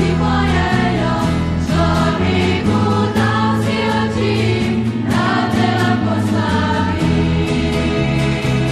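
Compressed frames skipped at 5.32 to 5.34 s: about 50 ms of audio never plays, which fits two missing 23.2 ms frames, and the sound jumps ahead.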